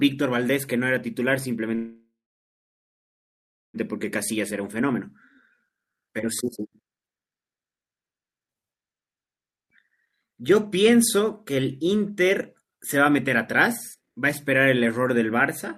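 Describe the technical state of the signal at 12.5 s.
At 12.5 s the speech signal is intact, with no audible fault at that moment.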